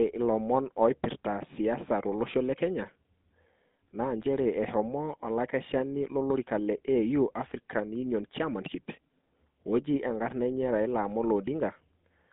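From start to finish the speech passes through the GSM full-rate codec, and the damage is plainly audible. The codec rebuilds the voice from a vocal-tract filter driven by a sparse, regularly spaced pulse excitation, which fits a 13 kbps full-rate link. That excitation leaves a buzzy, gravelly roughness. On a spectrogram the energy sits in a band from about 150 Hz to 3.7 kHz, with nothing above 3.8 kHz, and harmonics look smeared.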